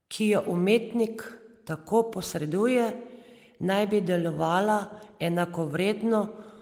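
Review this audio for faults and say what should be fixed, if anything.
Nothing needs fixing here; no faults can be heard.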